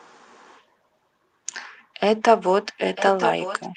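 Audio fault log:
2.95–3.77 s, echo leak: a delayed copy of the speech arrives about 0.95 s after the original, sitting roughly 10 dB below it and running to the end of the clip. This is likely echo from a loudspeaker at the far end: that side's microphone picked up the played-back audio, its echo canceller failed to remove all of it, and the leftover was sent back down the line, so earlier sound returns as a quieter trailing repeat.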